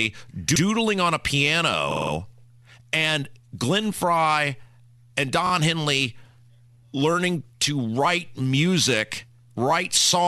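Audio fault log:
0.55–0.63 s, 1.91–2.12 s and 5.46–5.51 s: repeated frames. A short block of compressed audio is played again. At 0.55 s a 78 ms block sounds twice, just before "on a". At 1.91 s a 52 ms block plays four extra times, giving a stutter. At 5.46 s a 26 ms block repeats twice. The block sizes fit frames of about 26 ms. The repeats make the clip about 0.34 s longer.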